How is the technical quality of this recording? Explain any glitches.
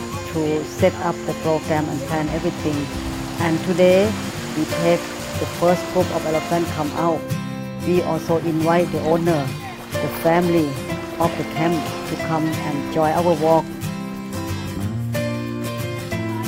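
The recording has one recurring fault: clock drift buffer slips. From 0.89 s to 16.38 s a short click sounds about every 0.86 s, roughly twenty in all, at an unvarying rate. The likely cause is two devices on independent clocks, mismatched by around 200 ppm, so the buffer between them drifts until a handful of samples is dropped or repeated. Each slip breaks the waveform's continuity, producing the regular tick under the signal.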